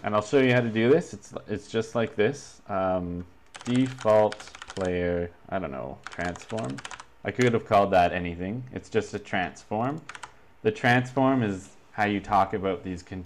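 No technical faults detected anywhere in the clip.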